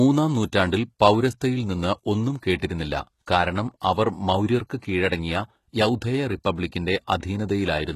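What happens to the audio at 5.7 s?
As throughout the clip, 5.7 s carries HE-AAC compression. Nothing sounds above 12.3 kHz. Treble is likely rebuilt from copied lower bands, so s sounds turn gritty.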